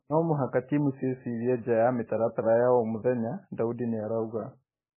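Speech, with MP3 compression damage throughout. Nothing above 3 kHz remains. The sound is heavily watery and swirly, likely from MP3 at a bitrate near 10 kbps.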